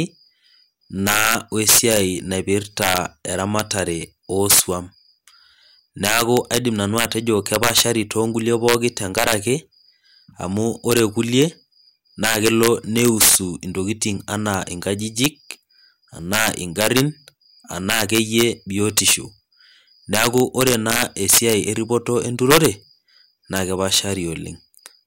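Integer overflow runs through the whole speech clip. The signal is driven about 7 dB past the top of the integer range. Nothing limits it there. Each peak that crosses the ceiling wraps around to the opposite extreme. Only a small share of samples go over, roughly a third of a percent. But every one jumps across the full range. The result is violent, sharp cracks on the loudest moments. They are far harsher than ordinary clipping.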